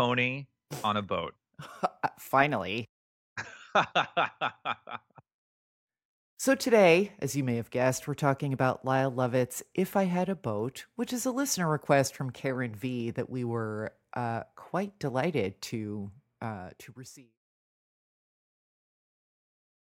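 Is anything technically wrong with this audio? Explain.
No, nothing is technically wrong.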